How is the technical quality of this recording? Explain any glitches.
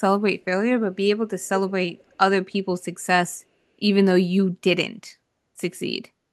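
The recording has one kind of glitch, heard twice. Echo leak occurs from 1.68 to 1.72 s and again from 1.97 to 2.16 s: a faint, delayed copy of the speech arriving about 322 ms behind the original, first as a brief scrap roughly 25 dB down, then as a longer, weaker trace near 35 dB below. The likely cause is a far-end loudspeaker whose echo canceller let some of the sound its microphone picked up pass back into the call.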